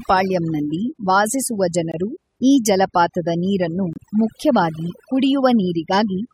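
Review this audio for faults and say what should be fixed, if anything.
Overdone noise removal runs through the whole clip: the background drops and breaks up into twinkling specks. Bands near the estimated noise floor are cut away along with quieter parts of the speech. Lower the reduction strength or use a gentler spectral floor.

Gaps between stream segments occur at 1.92 to 1.94 s and 3.93 to 3.96 s. These are hard-edged silent holes of about 21 and 25 ms, spaced two seconds apart, where segment timestamps leave a gap that the player fills with silence. Align segment timestamps so each segment begins exactly where the previous one ends.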